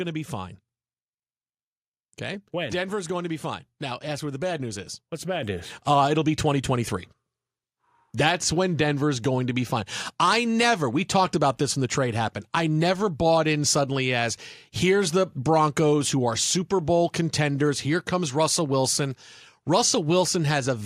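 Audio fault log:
5.43 s, microphone volume stepped up: the call software decided the mic was running quiet and bumped the input gain in a single jump of about 7 dB, so the speech and the room behind it get louder together, right at that instant.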